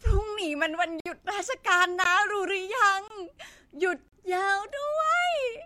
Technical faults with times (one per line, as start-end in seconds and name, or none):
1.00-1.06 gap between stream segments
2.04 gap between stream segments
3.08-3.10 gap between stream segments
4.08-4.13 gap between stream segments